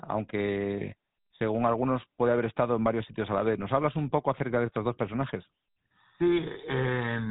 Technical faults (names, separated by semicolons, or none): GSM full-rate codec